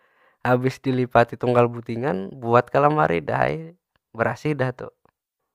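Nothing in this bit of speech stands out as a technical fault, so there's nothing here to flag.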